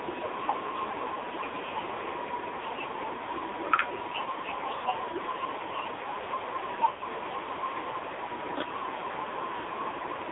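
From the first second to the end, the speech carries heavy AMR narrowband mobile codec damage. The vocal-tract model is fed by very few pulses per frame, so the sound is buzzy and synthetic, which fits the codec's lowest modes at about 5.9 kbps. The line passes roughly 300 Hz to 3.7 kHz. On a spectrogram there is nothing above 3.7 kHz and little below 300 Hz, and the harmonics look smeared and grainy rather than cleanly striped.

At 4.78 to 4.86 s, a short stretch of lost AMR speech frames lasts about 60 ms. The decoder replays its last good pitch and filter settings at falling gain, which produces a brief warbling dip. From 6.90 to 7.08 s, losses scattered over 160 ms, including a 100 ms run, stretch the sound into a drawn-out tone that fades toward silence. The sound returns weak or rough for a moment. In the waveform, each loss shows as a decaying, repetitive envelope. On a spectrogram, it shows as frozen, horizontally smeared bands that fade out.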